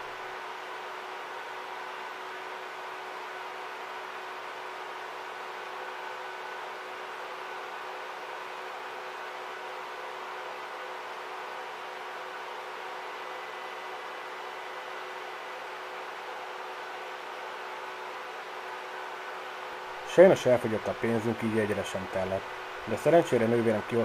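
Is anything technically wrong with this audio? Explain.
Yes. At 19.72 to 19.74 s the chunks are out of order: one 10 ms chunk was delivered one chunk late and played after its successor. Nothing is missing, but the swapped order leaves three hard joins, heard as a brief jumbled moment.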